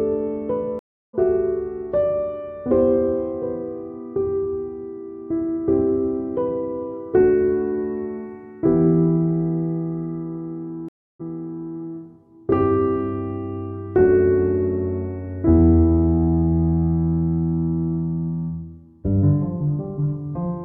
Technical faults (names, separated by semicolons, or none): stream reconnect